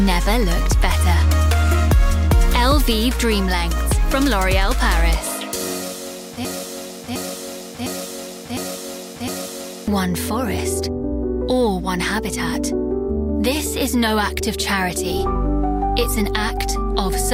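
A broken-record loop runs from 6.45 to 9.88 s: a 0.71 s fragment repeats exactly, back to back, five times. The likely cause is a stalled player, encoder or stream resending the last piece it held, and what should have played there is lost.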